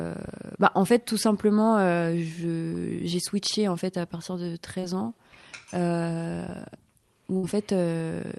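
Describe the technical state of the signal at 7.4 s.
A brief held, fading smear from 7.37 to 7.45 s, then a jump ahead: a burst of packet loss, concealed by extending the last sound, with about 60 ms missing.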